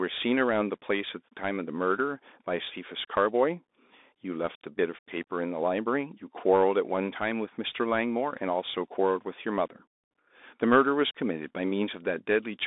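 Bluetooth CVSD headset codec damage runs throughout. The speech sits within 250 Hz to 3.7 kHz, fitting a 64 kbps CVSD link whose one-bit samples only step up or down. Loud high sounds outrun the adaptive step and distort, s sounds scratch, and granular hiss lies beneath.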